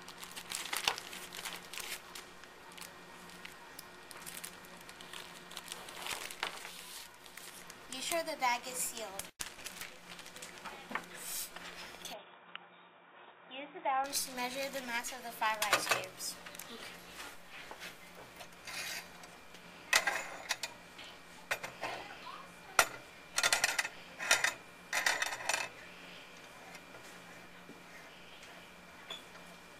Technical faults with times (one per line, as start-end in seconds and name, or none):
12.13-14.04 input switched to a poorer device